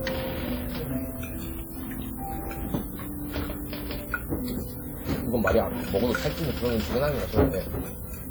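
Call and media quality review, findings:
Low bit depth with noise shaping, throughout. Sample words truncated to very few bits, fits a 7-bit path. Rounding error shaped upward, giving a steady thin hiss climbing toward the top, only around 15 dB under the sound.

Codec stage, throughout, likely WMA compression, consistent with a bitrate near 48 kbps. Long transform blocks smear quantisation noise across tens of milliseconds, with weak components zeroed. Plainly audible ringing, washy hiss that breathes with the audio, nothing above 20.1 kHz.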